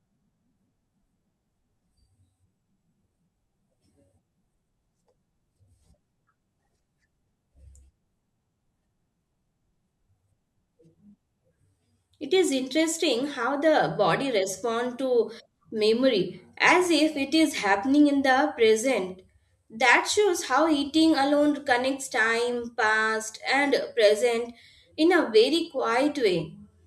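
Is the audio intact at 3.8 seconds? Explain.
Yes, the speech at 3.8 seconds is intact, with no audible fault at that moment.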